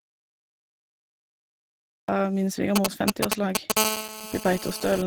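The clip opens already inside an audio dropout to silence that runs from 0 to about 2.09 s. It's plain silence, with no room tone or hiss underneath, which is what you get when the input goes away and the recorder keeps writing empty samples. A lost connection or an accidental mute is the likely culprit. Whatever speech fell in that stretch is simply gone, and the sound comes back abruptly mid-flow.

Across the whole speech clip you can hear a hoarse, muffled, grainy texture that sounds like Opus compression at a low rate. The damage is plainly audible. The character suggests the encoder dropped into its hybrid mode, where the low band is handled by a speech coder and the upper band is filled in more roughly. That fits something around 16 kbps. The bandwidth stays fullband, reaching up to about 20.5 kHz, so the dullness comes from coarse coding rather than a low-pass cut.

From about 2.76 to 3.72 s there are GSM signalling bursts: a galloping dit-dit-dit of ticks and short buzzy clusters, running a bit louder than the speech itself. 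A 2G handset nearby is sending brief groups of radio bursts during signalling, and something in the audio chain is rectifying them into audible clicks. Inside each cluster the pulses repeat at about 217 Hz.

Right after, from about 3.77 to 5.02 s, the pattern settles into a continuous GSM phone buzz. This is a hard, raspy 217 Hz tone with a dense stack of harmonics, sitting about 4 dB below the speech and completely unrelated to it. It points to the phone now transmitting steadily as in a call, its 217-per-second burst frame getting demodulated by the circuitry into a constant buzz.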